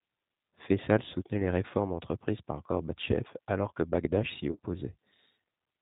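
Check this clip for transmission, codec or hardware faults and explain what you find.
Two faults are present. Throughout, G.729 codec coding, consistent with 8 kbit/s, cuts everything above 4 kHz and rebuilds the speech from a pitch-and-filter model, leaving it plainly rough and synthetic. From 4.51 to 4.59 s, VoIP packet loss concealed by the speech codec removes about 70 ms of audio scattered over 80 ms, with a longest gap of 40 ms. The decoder extrapolates from its last frame with falling gain, so the speech is stretched into a fading buzzy tone or coloured noise and stays weak, recovering only gradually.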